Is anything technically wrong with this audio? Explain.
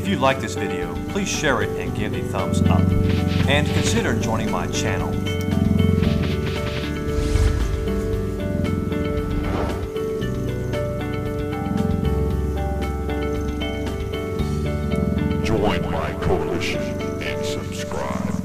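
No, nothing technical stands out here, so there's nothing that needs fixing.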